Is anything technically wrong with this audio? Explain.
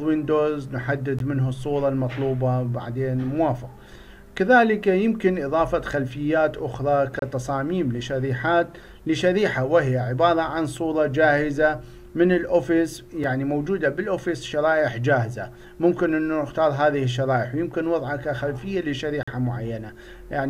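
Yes. Gaps between stream segments: the segment timestamps don't meet, so the player inserts silence at each boundary, which fits 6-second segments. The sound drops out with hard edges at 1.19 s (16 ms), 7.19–7.22 s (29 ms), 13.24 s (4 ms) and 19.23–19.28 s (44 ms). No audio is lost, only delayed.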